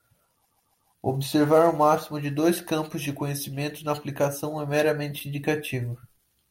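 A run of compressed frames in this speech recording was delivered to the decoder more than once. The repeated frames replay the same 144 ms block three extra times between 0.45 and 0.88 s. A block of that length fits a run of about six frames. The result is a stuttering loop where the talker seems to catch on one fragment. Those three repeats add 432 ms, so everything after the stutter arrives that much later than it should.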